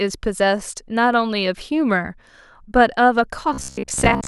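From 3.53 s to 4.27 s the speech collapses into robotic sound from repeated short buffers. A steady metallic buzz sits at about 66.8 Hz, and the speech only loosely shows through it. That pitch matches a chunk of roughly 15 ms being played over and over. For most of this stretch, around two thirds or more, the output is repetition rather than fresh audio. The likely cause is audio arriving too slowly, with the last short buffer looped to fill the gaps.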